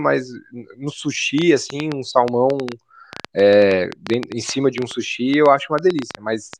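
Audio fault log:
1.38–6.54 s, train of clicks: a run of short, near-identical pulses ticks over the speech at about 7 per second for roughly five seconds, around forty clicks in all, with uneven spacing between them. The peaks stand about 10 dB above the speech, so each one cuts through as a sharp pop and stays audible in the pauses as well. The repeated shape points to a single intermittent source, likely electrical interference or a faulty connection or power supply.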